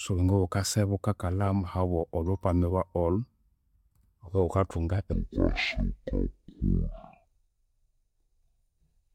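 From 5.13 s to the end, the speech suddenly drops to half speed and an octave lower, with a faint mirrored copy in the upper spectrum. This is stereo read as mono: interleaved left and right samples are played sequentially as one channel, doubling the length.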